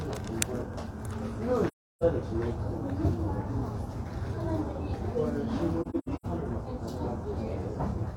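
An everyday-sound recording with AAC frame loss and muting in two places. From 1.67 to 2.03 s the audio fades into a near-silent hole of about 0.34 s, consistent with eight lost frames whose spectra the decoder zeroed. From 5.81 to 6.26 s shorter gaps are scattered, the longest around a tenth of a second. Overlapping windows soften each edge, unlike a hard dropout.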